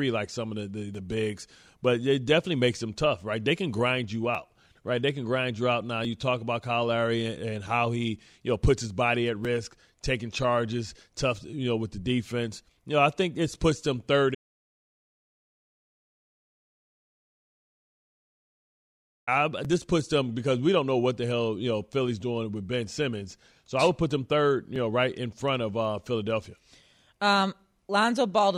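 At 14.35 s the speech drops out to dead silence, no room tone at all, until 19.27 s, so about 4.9 s is lost, likely from the input disconnecting or muting mid-recording.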